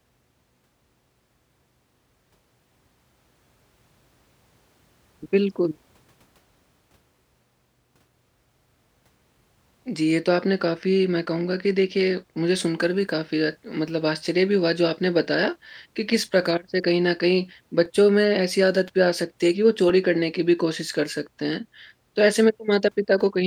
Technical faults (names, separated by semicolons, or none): periodic USB or driver dropouts